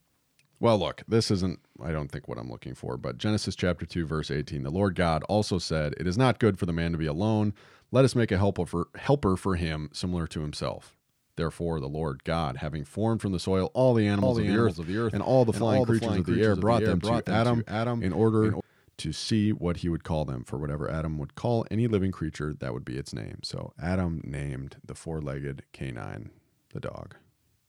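A doubled audio track runs from 14.2 to 18.6 s. A second, full-band copy of the speech trails the original by roughly 0.4 s at around 5 dB lower, likely from a slower capture path feeding the mix. It has no reverberant tail and begins and ends abruptly.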